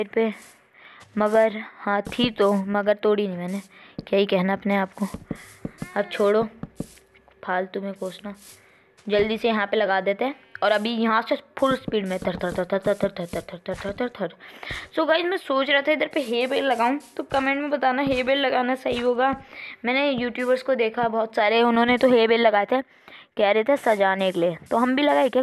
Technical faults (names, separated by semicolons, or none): none